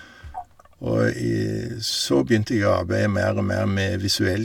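Nothing is technically wrong with this speech recording.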